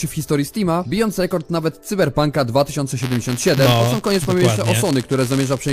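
From 3.02 s to the end there's buffer tearing: writer and reader have slipped, so a sliver of each buffer replays audio from a lap earlier, giving a steady 172 Hz buzz, which fits a 256-sample buffer.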